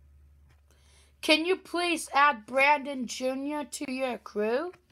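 The audio has a gap at a join of encoded pieces at 3.85 to 3.88 s, where a silence of about 29 ms cuts into otherwise continuous sound. The edges of the dropout are softened by codec smearing, and the sound resumes exactly where it left off. This points to separately encoded segments spliced together untrimmed, leaving the encoder's start-up delay and final-frame padding as dead air at the seam.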